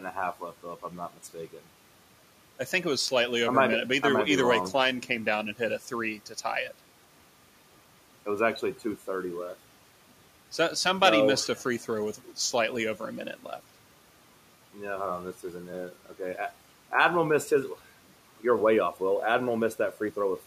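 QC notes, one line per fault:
Throughout: timecode bleed. A steady chirping warble sits behind the speech, flipping between two pitches around 1 kHz and 2 kHz, roughly 30 dB under the voice. The pattern repeats at 29.97 frames per second, which points to linear timecode leaking in from a neighbouring track or cable. Unlike a hum or a single whine, it keeps switching between the two pitches in a fast, rhythmic way, and its level doesn't change with the speech. The room noise stays about 23 dB below the speech.
0.83–1.35 s and 6.18–6.45 s: speech cut by the noise suppressor. Right after "left though if" and again after "and hit a three", about a tenth of a second of speech drops away, by up to about 11 dB at the first spot and about 9 dB at the second. The suppressor mistook quiet parts of the speech for background and turned them down along with it, so they sound swallowed. What sets this apart from a dropout or a clipped edit is that the sound dims rather than vanishing, and the background dims with it instead of the signal cutting to silence.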